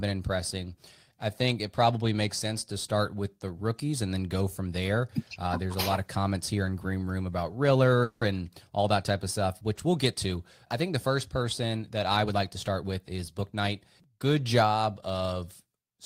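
At 8.03 s, just before "and all that type", the speech stops advancing for about 180 ms and the last sound is stretched into a fading buzz, then resumes where it left off with nothing lost. This call audio freeze likely came from delayed packets draining the jitter buffer, adding roughly 180 ms of delay.

From 12.25 to 13.81 s, right after "first person that I", the talking sounds hurried, running at 110% speed while the pitch stays put. This jitter buffer speed-up trimmed short pitch-period slices repeatedly, about 150 ms in total, to shrink an overfull buffer.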